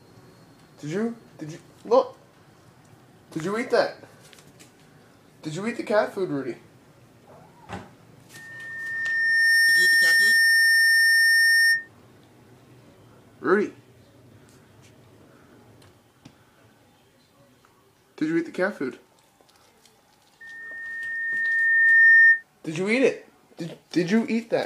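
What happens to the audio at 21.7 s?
At 21.7 s the audio is in the middle of a loudspeaker feedback squeal running from 20.41 to 22.43 s. A microphone is picking up the speaker it drives, and at 1.8 kHz the loop gain passes unity, so that tone feeds on itself. It swells over about a second and a half to roughly 10 dB above the other sound. A spectrogram shows one bright horizontal line at 1.8 kHz, and the waveform's envelope balloons until it cuts off.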